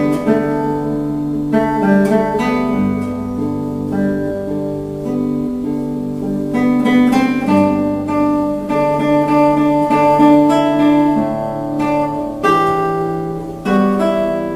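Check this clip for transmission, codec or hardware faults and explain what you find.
Nothing stood out on listening to this clip.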